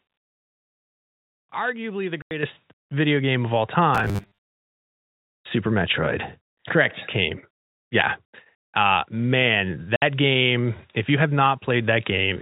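At 2.22 to 2.31 s, packet loss filled with silence cuts a 90 ms hole in the speech. The receiver had nothing to play for that stretch and inserted digital silence. The gap's length suggests three 30 ms packets went missing. The sound drops out abruptly, with hard edges on both sides.

At 2.43 s, the microphone volume steps up by about 7 dB. The call software judged the input too quiet and raised the device's gain in a single jump rather than a gradual ramp. The speech and the background noise both get louder at the same instant. It comes right after the first dropout.

From 3.95 to 4.57 s, the speech takes on a robotic sound from repeated short buffers, most likely because fresh audio arrived too late and the last 10 ms or so was replayed to fill the time. Repeating a 10 ms slice forces a steady 100 Hz buzz onto the sound. About half the real audio is skipped, so the speech turns metallic and rigid while still roughly keeping its shape.

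At 9.96 to 10.02 s, packet loss filled with silence strikes again, this time leaving a 60 ms gap, consistent with two lost 30 ms packets. It is another clean hole in the speech. Throughout, the G.711 telephone coding keeps everything above 4 kHz out of the audio.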